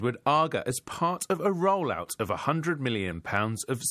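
A short bit of speech, and there's nothing technically wrong with it that a listener would pick up on.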